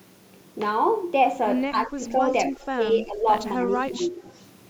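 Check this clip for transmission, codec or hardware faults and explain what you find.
Two faults are audible in this speech. The first, speech suppressed in double talk, appears from 1.72 to 2.02 s, 2.5 to 3.28 s and 3.54 to 4.22 s. The talker dips by up to roughly 15 dB, lighter in the last span. Likely an echo canceller muting both overlapping sides. The second, an echo leak, comes at 4.29 to 4.42 s. A faint copy returns 225 ms late, very quiet. Likely residual loudspeaker pickup escaped cancellation.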